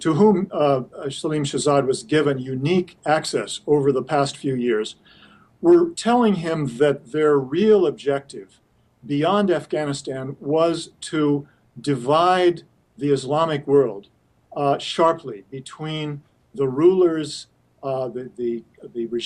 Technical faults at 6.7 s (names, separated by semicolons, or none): none